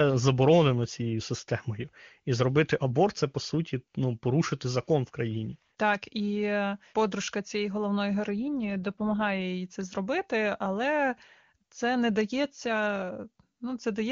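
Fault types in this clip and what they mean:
AMR rate drop: a weakening radio link made the network switch AMR-WB to a lower mode, spending bits on error protection; from 8.28 to 9.41 s, after "е подружка цієї головної", speech turns rough and synthetic without a gap, fitting a 23.85 to 8.85 kbit/s step.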